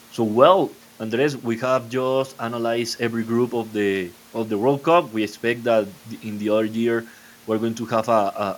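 No technical faults can be heard anywhere in the recording.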